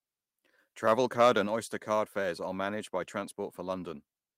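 At 1.47 s the speech and the background beneath it drop together by about 5 dB in a single step, a microphone volume stepped down. The likely cause is the calling software judging the input too hot and cutting the device's input volume at once. It sounds like the talker abruptly moving back from the microphone. On a waveform the envelope shrinks at one instant; a spectrogram shows every band dimming uniformly across the same vertical line.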